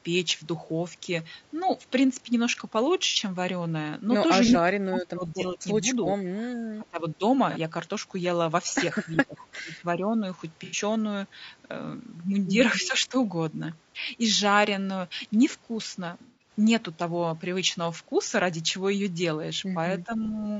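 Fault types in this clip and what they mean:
low-delay AAC compression: Throughout, the speech sounds rough and grainy, which fits AAC-ELD at around 32 kbps as the likely codec. Short frames blur pitch harmonics, so a spectrogram shows noise filling the gaps between harmonic lines and a thinned, synthetic-looking top band.
AAC frame loss with concealment: Four brief gaps (60, 30, 90 and 180 ms) were patched from the last good spectrum and sound smeared, noisy or phasey. On a spectrogram each shows as a smudged block with blurred harmonics.
echo leak: Twice, at 4.48 s and 20.24 s, a faint delayed copy of the speech returns about 374 ms late. The likely cause is an echo canceller on the loudspeaker side letting some loudspeaker pickup through. The copy sits roughly 15 dB and 25 dB down, a weak repeated pattern.
speech suppressed in double talk: The talker's level dips while the other side speaks, most deeply between 4.51 and 7.23 s, by around 25 dB. 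Smaller dips follow near 9.2, 13 and 20.1 s. The likely cause is an echo canceller turning down both its own talker and the loudspeaker echo, and the waveform envelope visibly caves in.
bit error spike: At 10.45 s a single sample jumps and returns, heard as one sharp tick unrelated to the speech. The waveform shows a lone one-sample spike, and the spectrogram shows a thin vertical line spanning all frequencies.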